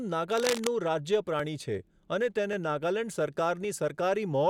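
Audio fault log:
0.31 to 0.68 s, cable scratch noise: dense, uneven bursts of crackle sit over the speech, close to its level. This is likely a worn cable, connector or control being moved, its contact resistance changing rapidly and injecting rough, rustling noise into the signal.
1.40 s, 2.53 s and 3.65 s, dropped buffer (overrun): each point gives a small forward jump in the speech, the loss growing from a few milliseconds to around 15 ms. Samples were likely overwritten before being read, so the surrounding audio is spliced directly together.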